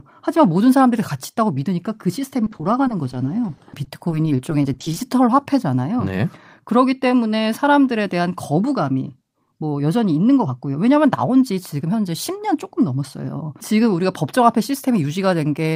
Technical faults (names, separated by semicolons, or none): repeated packet loss (robotic sound)